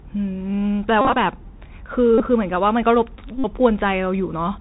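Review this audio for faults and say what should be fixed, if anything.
Bluetooth CVSD headset codec, throughout the clip: the speech is confined below 4 kHz, and s sounds come out scratchy over a granular hiss. The codec sends one up-or-down bit per sample, which fits a 64 kbit/s CVSD link. When loud high-frequency sound changes faster than its adaptive step can track, it distorts. To prevent it, switch the headset to a wideband mSBC or LC3 voice link, or record from a wired microphone.

Bluetooth headset packet repeated, at 1.01 to 1.16 s, 2.18 to 2.21 s and 3.38 to 3.46 s: each lost voice packet was replaced by decoding the previous packet again. In the first burst, about 90 ms was lost across 143 ms, with the longest unbroken run around 40 ms. The losses in the other two bursts total about 19 ms and about 56 ms. Along the runs, the 3.75 ms repetition produces a steady buzz near 267 Hz. 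To prevent it, keep the headset close to the phone and away from Wi-Fi and 2.4 GHz interference so packets arrive intact.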